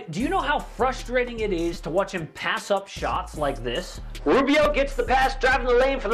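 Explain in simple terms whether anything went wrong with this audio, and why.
Two tiny glitches can be heard, at 1.74 s and again at 4.64 s. Each is a brief click or buzz. A very short scrap of sound repeats with a hard join each time. This is a repeated buffer. New audio didn't reach the playback device in time, so it replayed its last chunk three extra times. The chunk is so short, which fits a buffer of about 5 ms, that the stutter blurs into a click, and roughly 15 ms of real sound is lost.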